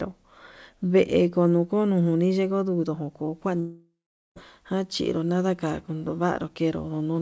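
From 3.60 to 4.39 s the speech breaks off in what is likely a long network dropout. About 0.76 s of audio never arrives. The receiver stretches the last sound into a buzzy tail that fades, leaving roughly 0.44 s of near-silence, and speech resumes mid-stream with the lost part gone. Unlike a brief concealment glitch or a deliberate mute, it has a decaying synthetic tail and skips content. The G.722 call path leaves nothing above 8 kHz.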